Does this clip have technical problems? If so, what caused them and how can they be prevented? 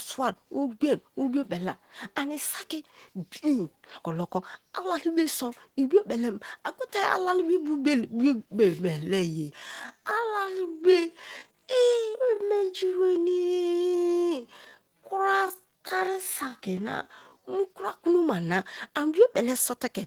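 Yes. Throughout the clip, the speech sounds hoarse and grainy, with rough, noisy texture on the voiced sounds. The damage is plainly audible, most likely from Opus compression at a low rate that fits about 16 kbps with the encoder in its hybrid mode. Unlike MP3 damage, there are few swirling spectral holes, and the top end isn't cut, since content reaches about 20 kHz. Encoding at a higher bitrate would prevent it.

From 8.59 to 17.59 s there is a time-stretched section: the pace drops abruptly to about 0.59 times normal speed while the pitch stays the same. Short pieces were likely repeated to lengthen the audio. A slowed-down recording or tape drag would also lower the pitch, and that held pitch is what sets this apart. Leaving the timing untouched, or using a higher-quality stretch with a smaller ratio, would prevent it.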